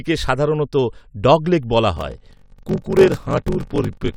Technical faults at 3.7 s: block size mismatch (padded)

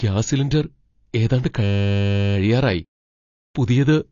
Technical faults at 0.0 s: AAC compression

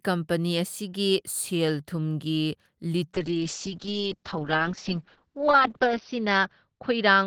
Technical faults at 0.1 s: none

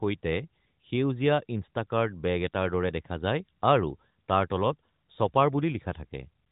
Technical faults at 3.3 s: none

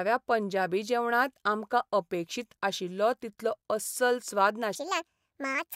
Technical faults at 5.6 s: section at the wrong speed

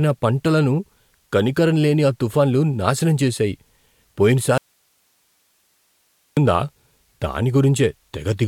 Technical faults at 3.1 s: none

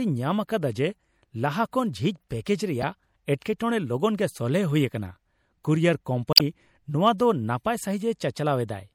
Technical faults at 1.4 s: MP3 compression

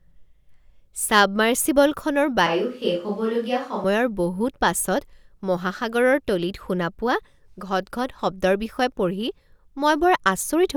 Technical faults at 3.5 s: switch to a distant microphone

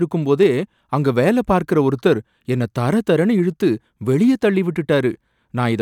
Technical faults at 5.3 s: none

